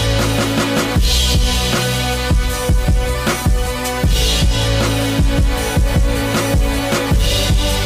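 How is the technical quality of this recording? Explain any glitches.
No technical glitches can be heard anywhere in this recording. There is nothing in the audio that calls for an explanation.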